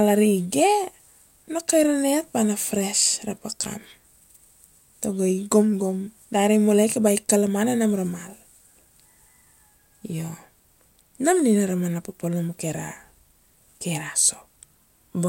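A speech recording, with nothing technically wrong with it.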